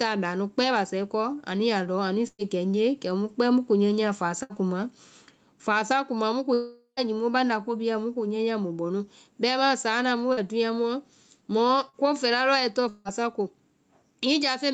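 This speech clip has four kinds of fault. Throughout, the level pumps, with a swing of about 10 dB. Loud and quiet parts sit close together, so the sound is squashed and breathes. This is gain pumping. The likely cause is input gain set far too high, with a fast limiter or compressor clamping down on each peak. There are two bursts of packet loss. The first runs from 2.27 to 2.42 s. About 120 ms of audio is missing. The receiver stretches the last sound for about 110 ms, fading it, and then about 50 ms of silence follows before the audio resumes further on. The second runs from 4.43 to 4.53 s. About 80 ms is missing, covered by a 70 ms fading continuation. Each gap sounds like a held buzz or hiss followed by a jump. There are also two longer breaks that sound like long network dropouts. The first comes right after "kuma mu", from 6.54 to 7.00 s. About 440 ms is missing. The last sound is dragged out as a fading buzz or hiss for about 430 ms, and roughly 120 ms of it is near silence. 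The second runs from 12.89 to 13.08 s. About 160 ms is lost, filled entirely by a fading continuation with no true silence. In both, the audio returns further on, skipping what was lost. The likely cause is a stall in the network path. Two brief smears come from short concealed packet loss. One is just after "saana mu", at 10.33 to 10.40 s. The other is just before "ko fɛla", at 11.89 to 11.96 s. Each hole is about 40 ms. The receiver bridges it by extending the previous sound and blending back, which gives a quick smear or wobble, and a short consonant can disappear. The top of the spectrum stops at 8 kHz, as expected for this call path.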